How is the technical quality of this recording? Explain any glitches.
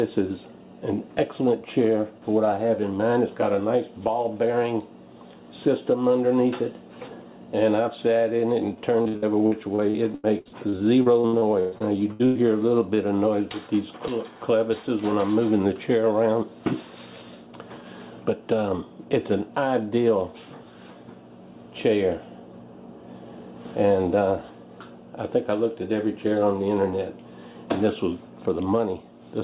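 The recording has one clear glitch, heard through a narrowband call path with nothing above 4 kHz, which fits G.711 mu-law at 64 kbps.

Repeated packet loss (robotic sound) runs from 9.02 to 12.38 s. Packets went missing in quick succession, 18 gaps with the longest 123 ms, and each hole was patched by extending the previous sound. Roughly 28% of that stretch is filler, so it sounds choppy, with pieces dropped.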